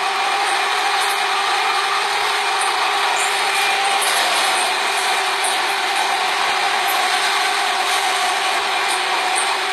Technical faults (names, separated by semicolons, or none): HE-AAC compression